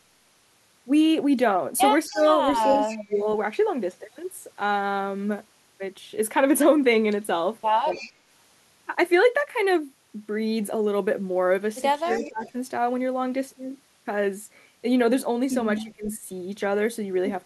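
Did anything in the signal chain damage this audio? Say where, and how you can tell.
Yes. A faint, delayed copy of the speech, roughly 20 dB below it and trailing by 261 ms, surfaces at 2.09–3.16, 7.92–8.12, 12.11–12.51 and 15.77–15.83 s. This echo leak likely comes from call processing: a loudspeaker-side echo canceller let part of its microphone pickup return.

The speech dips by around 15 to 20 dB at 2.10–2.24, 2.65–3.26, 12.04–12.56 and 15.83–16.21 s, each time overlapping or directly following that returning echo. This is speech suppressed in double talk, likely the canceller failing to separate its own talker from the loudspeaker echo and turning both down.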